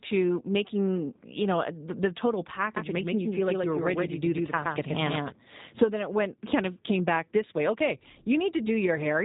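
Throughout, G.729 codec damage is plainly audible. Nothing above 3.8 kHz survives, and speech rebuilt from pulses sounds rough and synthetic, not merely muffled like plain low-pass filtering.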